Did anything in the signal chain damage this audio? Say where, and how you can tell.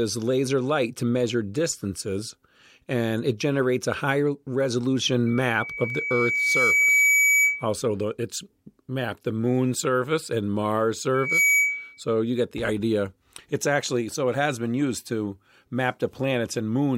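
Yes. Loudspeaker feedback squeal appears from 5.26 to 7.68 s, ending just before "the it's mapped the", and again from 11.14 to 12.00 s, just before "you get the idea". The stage is the analogue acoustic path: the microphone picks up the loudspeaker it feeds, and at 2.3 kHz the loop gain exceeds one, so that single tone feeds itself. It swells over about two seconds the first time and much faster the second, peaking a few dB above the speech.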